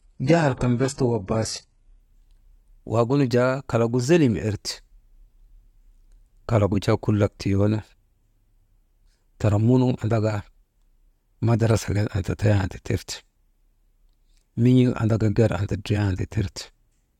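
From 0.0 to 2.0 s the speech plays from an adaptive stream starting at a low bitrate. The player opened on a lean version to start quickly, then stepped up once it had gauged the connection. For those two seconds the treble is thin and synthetic, with nothing above 11.5 kHz and heavier smearing, which fits HE-AAC at about 12 kbit/s. At 2.0 s the quality jumps to what sounds like AAC-LC near 96 kbit/s, and unlike a reconnect or a stall, the sound continues without any gap.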